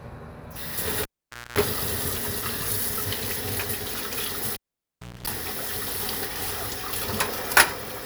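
Everyday sounds, interrupted twice by a cable pulled and plugged in, at 1.03–1.58 s and 4.54–5.27 s. Each time, a pop opens a near-silent gap of 0.51 s or 0.68 s. About 0.24 s of 60 Hz mains buzz from tip-only contact follows, then another pop. Waveforms show spikes around flat stretches, and spectrograms show vertical click lines and horizontal 60 Hz harmonic stripes.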